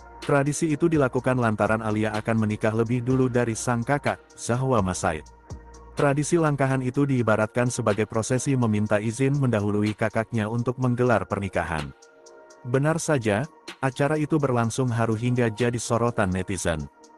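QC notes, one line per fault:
9.76 to 9.80 s, short stall from a late packet: the jitter buffer ran dry, so the last sound was held an extra 19 ms, visible as a repeated, smeared stretch.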